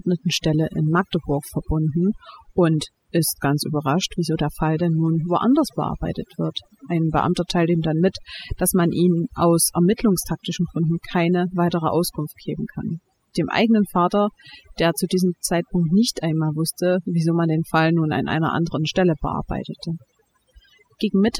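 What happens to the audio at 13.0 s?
Overdone noise removal at 13.0 s, as throughout the clip: aggressive noise reduction mutes bands near its noise estimate, leaving twinkling near-silence.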